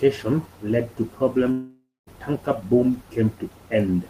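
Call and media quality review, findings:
Long network dropout, 1.51–2.09 s. Speech gives way to a fading buzz, then about 0.22 s of near-silence; about 0.56 s of audio is lost for good. Likely receiver concealment bridging lost packets. Spectrogram: smeared, decaying harmonics, then an empty band until speech resumes.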